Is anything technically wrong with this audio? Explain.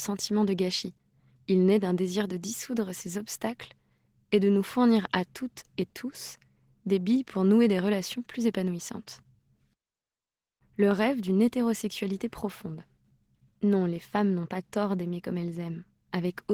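Yes. Throughout the clip the speech has passed through Opus voice compression at a low bitrate, which fits about 16 kbps in hybrid mode with 20 ms frames. The SILK linear-prediction coder handles the band below 8 kHz and a CELT layer handles the band above it, which points to fullband output. At this rate the excitation is coded coarsely, so the codec damage is plainly audible: the speech sounds muffled, hoarse and slightly robotic.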